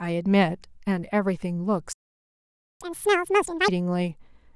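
Speech cuts out abruptly at 1.93 s and stays silent until 2.81 s, a gap of about 0.88 s, before resuming where it stopped. This is a playback stall, likely caused by the player running short of buffered data or having its output thread blocked. From 2.81 s to 3.68 s the speech rushes at double speed and sounds roughly ten semitones high, then returns to normal. This is catch-up at higher speed: the player resamples its backlog faster to recover the time lost in the stall.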